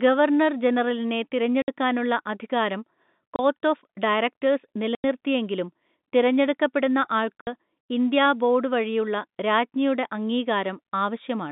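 Packets went missing and the receiver filled each gap with silence, so the speech drops out with hard edges: 60 ms at 1.62 s after "ഗവർണർ ജനറലിനെ", 30 ms at 3.36 s, 90 ms at 4.95 s, and 60 ms at 7.41 s before "ഇന്ത്യാ ബോർഡ് വഴിയുള്ള രാജ്ഞിയുടെ". All are multiples of 30 ms, which points to a 30 ms packet.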